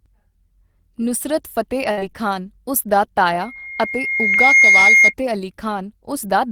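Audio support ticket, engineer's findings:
Network jitter/loss, 1.91–1.99 s: burst of packet loss, roughly 60 ms of stream never arrived in time. Receiver-side concealment extended the last received sound while fading it, heard as a held, decaying sound before speech resumes with that stretch gone.

Short concealed packet loss, 1.99–2.03 s and 4.33–4.37 s: about 20 ms missing each time, patched by the decoder's concealment from preceding audio. Heard as a brief smear or wobble, the first tacked straight onto the end of the burst.

Acoustic coupling, speaker into mic, 3.40–5.14 s: loudspeaker feedback squeal. Loop gain exceeded unity at 2.1 kHz, so a single tone swells over roughly a second to about 10 dB above the speech, then holds as a squeal until it stops.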